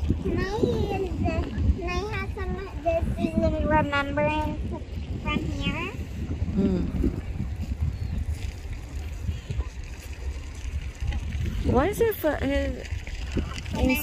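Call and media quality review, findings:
Bluetooth SBC bit pool drop, 4.08–5.10 s: congested link forced lower encoder bit pool, fitting 31 to 15 (near 105 kbps). Top sub-bands starved, treble dulls, gritty noise rises.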